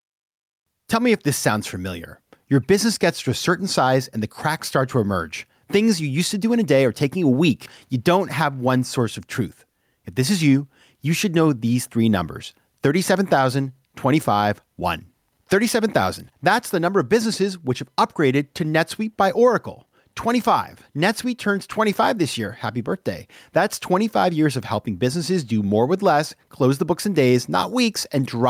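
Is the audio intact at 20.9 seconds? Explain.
No, gain pumping runs throughout: an over-driven input likely triggers a fast limiter, ducking the gain roughly 5 dB under each loud sound, so loud and soft parts end up closer in level and the speech sounds squashed.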